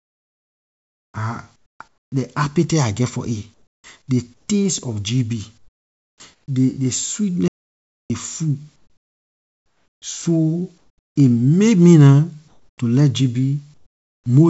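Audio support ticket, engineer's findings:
Comfort noise in place of the background: pauses go flat and featureless, up to about 13 dB quieter, at 0.0–2.1, 3.54–4.48 (after "geh for it"), 5.58–6.48, 8.76–10.02, 10.78–11.16, 12.48–12.78 and 13.74–14.26 s. Likely DTX on the call path, with the receiver synthesising noise in the pauses.

Audio dropout to silence: dead silence with no room tone at 7.48–8.10 s. Likely input lost upstream while the encoder kept writing silence. The band stops at 8 kHz, which fits a 64 kbps G.722 call path.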